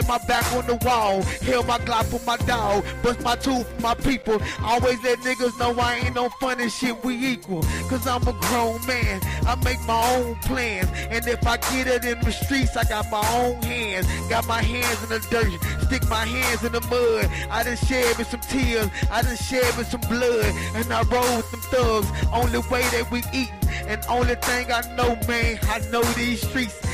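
From 0.33 s to 26.71 s, word clock ticks recur roughly every 0.3 s, about seventy sharp clicks of uneven strength. An unlocked receiver clock, off by something like 70 ppm, drops or repeats one sample per slip, showing as thin full-height vertical lines on a spectrogram and single-sample jumps in the waveform.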